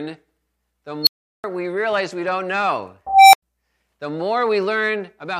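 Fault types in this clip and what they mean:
unstable filter: A recursive filter went unstable, so its output fed back on itself and grew without limit. Twice a tone swells, clips, then cuts to silence while the filter resets. At 1.02 s a squeal near 4 kHz peaks within 46 ms, leaving a 372 ms gap before "we realize we don't". After "realize we don't know", at 3.07 s, a tone near 700 Hz builds over 266 ms, then goes silent for 93 ms.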